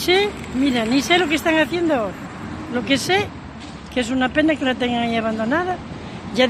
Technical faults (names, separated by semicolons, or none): dropped samples